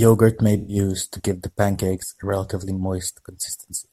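From 0.58 to 0.76 s, just before "to give the pancakes", the speech turns briefly smeared and hissy, the mark of AAC frame loss with concealment. Roughly 107 ms of coded audio went missing, consistent with about five consecutive frames, and the decoder patched the hole by reusing the last good spectrum with randomised phase. On a spectrogram the harmonics blur into a flat, grainy band with frozen formants; the waveform loses its periodic shape and looks noise-like.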